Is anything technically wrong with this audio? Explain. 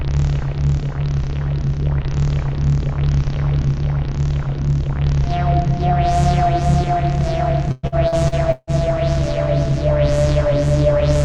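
Yes. From 7.71 to 8.70 s there is repeated packet loss (robotic sound): five gaps, the longest about 154 ms, patched by extending prior sound, giving choppy texture with smeared, repeated spectrogram blocks.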